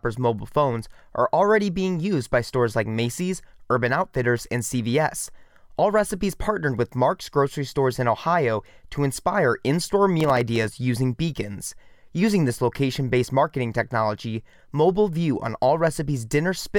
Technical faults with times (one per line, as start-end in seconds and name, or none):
10.20-10.68 processor overload crackle